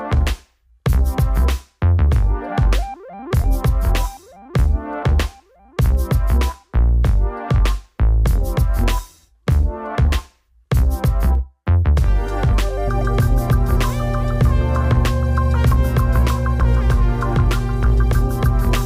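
A ground loop or nearby transformer lets the 60 Hz power line leak into the signal path, producing mains hum from 12.87 s to the end. It arrives as a steady low drone with some low harmonics, strong enough to sit almost level with the sound itself.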